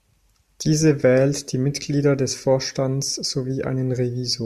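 No technical faults are audible anywhere in this speech recording.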